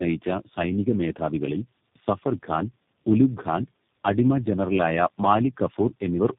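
Tandem speech coding throughout: several codecs each re-coded the previous one's output, leaving the speech rough, muffled and warbly, with nothing above 3.5 kHz.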